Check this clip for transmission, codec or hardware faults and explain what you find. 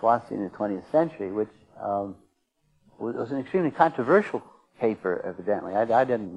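No transmission, codec or hardware faults turn up in this clip.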